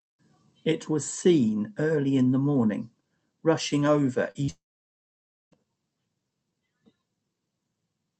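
At 4.31 to 4.37 s and again at 4.45 to 4.50 s, short concealed packet loss replaces about 40 ms and 20 ms of speech with extrapolated sound, heard as brief smears.

From 4.50 to 5.53 s the audio cuts out: the last sound fades into about 0.93 s of near-silence, likely a long network dropout, before speech resumes with content missing.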